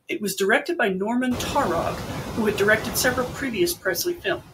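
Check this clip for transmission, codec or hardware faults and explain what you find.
Two related faults come from noise suppression on this speech recording.

Noise suppressor artifacts run throughout. The suppressor pulls steady background down by about 15 dB between phrases and lets it back up under speech, so the floor pumps. The room noise jumps about 17 dB near the 1.5 s mark, leaving it only about 9 dB below speech. Unlike codec artefacts, this tracks the noise floor rather than the speech content.

Speech cut by the noise suppressor occurs from 4.17 to 4.43 s. The suppressor mistook a quiet stretch of speech for background and turned it down with the noise, by up to about 16 dB over roughly 150 ms. Those sounds come out faint and swallowed but not silent, which separates this from a packet dropout.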